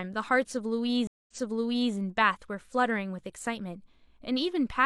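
It's a short speech clip with a stream reconnect between 1.07 s and 1.93 s. The audio drops out for about 0.21 s, then picks up again 0.65 s earlier than where it left off, so you hear a stretch of the speech a second time. That's the player losing its connection, reconnecting, and spinning up a fresh decoder mid-stream, with the server resending a burst of audio from just before the break.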